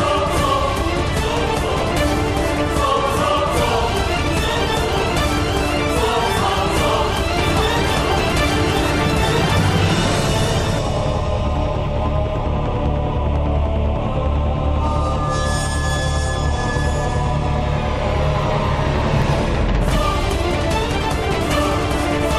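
A doubled audio track runs from 7.38 to 10.78 s: a second full-band copy of the audio sits roughly one second behind, about 5 dB quieter, dry and uncoloured, starting and stopping abruptly. This is likely a slower duplicate capture path mixed back in.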